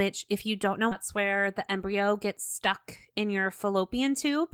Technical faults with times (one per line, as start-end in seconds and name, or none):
0.91-0.93 skip ahead
1.17-3.46 jitter buffer speed-up